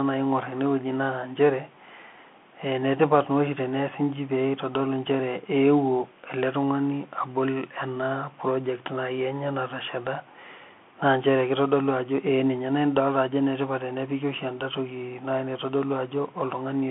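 Speech runs through a Bluetooth CVSD headset codec from start to finish. Nothing passes above 3.8 kHz and the band sits near 200 Hz to 3.4 kHz. One-bit up/down steps leave granular hiss and scratchy s sounds, which plain telephone band-limiting lacks. This fits a 64 kbit/s link.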